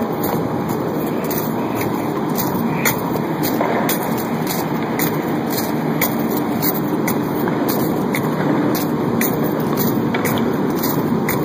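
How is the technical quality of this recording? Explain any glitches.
No technical glitches or faults can be heard anywhere here.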